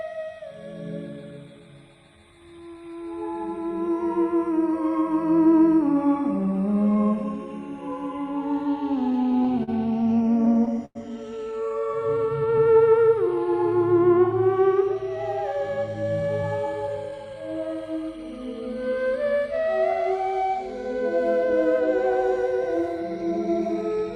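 From 9.12 to 10.97 s, repeated stalls (stutter): fifteen times the jitter buffer ran dry and the last sound was stretched to fill the wait, 271 ms in all, the longest gap 98 ms. Unlike packet loss, nothing drops out; the audio just drags and catches.

From 11.80 to 13.28 s, a jitter buffer slow-down repeats single pitch periods, adding 148 ms and playing at 91% speed. Pitch stays put, unlike a slowed tape, so sounds simply draw out.

From 15.16 to 17.49 s, a jitter buffer speed-up trims short pitch-period pieces, roughly 200 ms, running at 109% speed. It sounds hurried, yet without the raised pitch of fast resampling.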